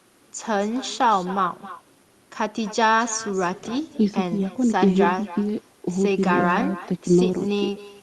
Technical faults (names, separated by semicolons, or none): echo with no canceller